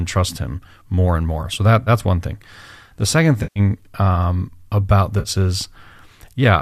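At 1.84–1.89 s, 3.43–3.60 s and 5.19–5.29 s the speech breaks into AAC frame loss with concealment. Frames never reached the decoder, so it rebuilt the gaps from the last good spectrum. The first and third dropouts, roughly 30 ms and 60 ms of missing audio, come out as brief smeared, noisy patches. The longest, about 130 ms at 3.43 s, goes hollow and sinks toward silence before the speech fades back in. The light coding texture throughout is likely from low-delay AAC coding at about 64 kbps.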